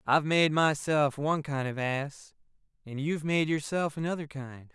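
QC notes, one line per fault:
No audible faults found.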